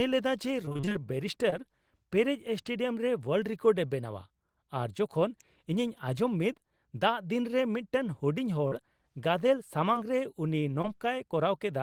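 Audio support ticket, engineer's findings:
Repeated packet loss (robotic sound), 0.65–1.01 s: choppy stretch. The decoder concealed eight gaps, so about half the span is synthetic. The holes recur before recovery, unlike isolated losses.

Short concealed packet loss at 1.50, 8.68, 9.94 and 10.82 s: each is one brief smear or wobble where 20–40 ms went missing. The decoder extended the last sound and then blended back into real audio. Each event is isolated, with no robotic run.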